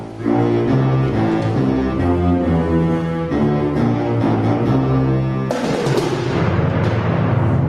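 Gain pumping runs through the whole clip, from start to finish. The overall level keeps rising and falling by around 10 dB, pulled down on loud moments and recovering between them, so loud and soft passages sit closer together than they should and the sound feels squashed. The likely cause is an input gain set far too high, with a fast limiter or compressor clamping down on each loud sound. The call path, meanwhile, rolls off content above 12 kHz.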